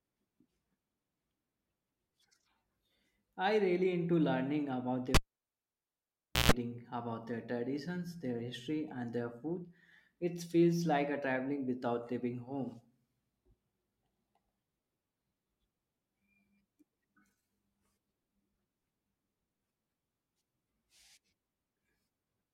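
At about 5.14 s the speech cuts out with a pop: a cable pulled and plugged in while live. The line drops to near silence for roughly 1.32 s. As the plug goes back in, only the tip touches first, so for about 0.14 s you get a rough 60 Hz mains buzz. Then the contact seats properly and there's a second pop as the sound comes back, all wrapped up by around 6.52 s.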